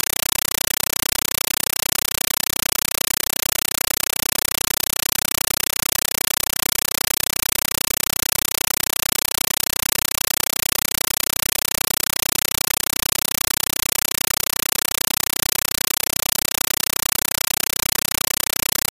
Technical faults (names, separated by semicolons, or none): compressed stream played as audio